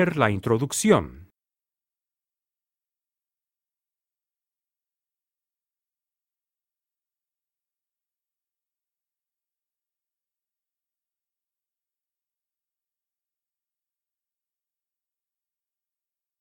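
No technical faults are audible anywhere in the sound, and nothing calls for correction.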